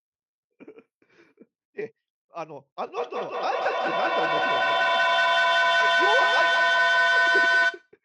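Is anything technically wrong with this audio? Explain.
Yes, there is a feedback howl from 2.84 to 7.92 s. Two devices in the same room are on the call, so the sound leaving one loudspeaker reaches the other microphone and returns with more gain each trip. Rather than dying away, the repeats climb and narrow to the frequency the loop favours, here around 1.5 kHz. The result is a ringing tone, built from repeats roughly every fifth of a second, that peaks about 7 dB above the speech.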